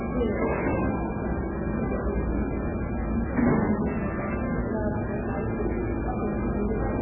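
Throughout, nothing above 3 kHz, with a watery, swirly texture and smeared attacks, likely heavy MP3 compression at a very low bitrate, around 8 kbps, zeroing weak frequency lines.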